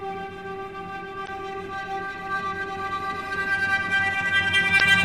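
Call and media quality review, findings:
Damaged data in a compressed stream, twice. Short blip at 1.24–1.29 s, about 50 ms. Same thing again at 4.77–4.82 s, same length. Decoder path: corrupted or lost bytes inside the encoded frames, so the decoder can't parse them, loses sync and hunts for the next valid frame header. Decoder mangles the audio while it resyncs, hence the glitch. Check transport and storage for byte loss or overwrites.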